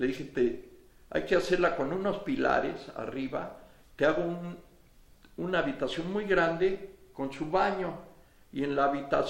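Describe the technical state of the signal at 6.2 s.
Nothing goes wrong with the signal at 6.2 s; the audio is intact at that point.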